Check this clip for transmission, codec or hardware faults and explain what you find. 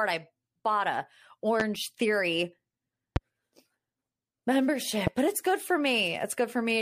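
Three loud pops interrupt the speech. Loud pop at 1.60–1.63 s (just after "I bought a"), 3.16–3.19 s and 5.07–5.10 s: a voltage spike, likely from a switch, static or driver glitch, adds a sharp thump peaking roughly 15 dB above the speech, which continues underneath.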